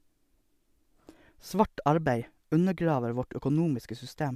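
A speech recording with no audible technical faults.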